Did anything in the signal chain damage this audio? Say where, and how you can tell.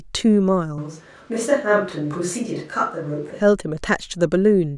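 Yes. A switch to a distant microphone runs from 0.78 s to 3.40 s. The speech turns roomy and hollow and loses bass, with background noise sitting roughly 30 dB below it, though the overall level barely changes. Both transitions are abrupt. The likely cause is at the capture stage: the close microphone's feed dropped out or was left unselected, so a far microphone covered that stretch, picking up more room reflections relative to the direct sound.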